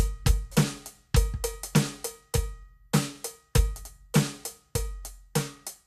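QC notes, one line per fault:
The music signal shows no audible technical faults at any point.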